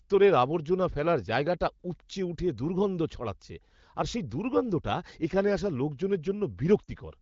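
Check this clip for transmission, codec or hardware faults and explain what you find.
One transmission fault appears near the end, in a wideband (HD Voice) call. From 6.83 to 6.90 s there are lost AMR speech frames. Radio errors corrupted the incoming frames, so the AMR-WB decoder discarded them and rebuilt the gap by repeating its last good pitch and vocal tract settings at a falling level. The 40 ms gap fits two lost 20 ms frames. Within those two frames the sound drops to near silence, and the sound is weak or rough for a moment as normal frames resume. The light coding texture elsewhere points to a fairly high AMR-WB rate, around 15.85 kbit/s.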